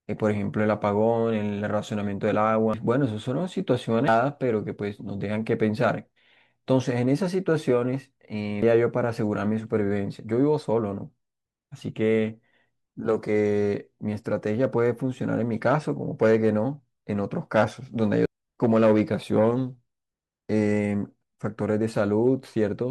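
At 2.74 to 2.77 s, 4.08 to 4.11 s, 8.62 s and 18.26 to 18.29 s, the speech is hit by damaged data in a compressed stream. Corrupted bytes make the decoder misread those frames and lose sync until it finds the next valid header, so each spot comes out as a brief chirp, squawk, click or short hole. On a spectrogram each shows as a narrow vertical smear; the waveform shows an abrupt, jagged discontinuity.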